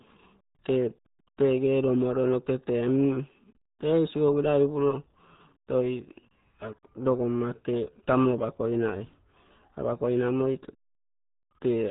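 Throughout, the speech carries RealAudio 14.4 codec damage. Nothing passes above 3.8 kHz. Heavy low-rate coding, fitting about 8 kbit/s, leaves it muffled and gargly.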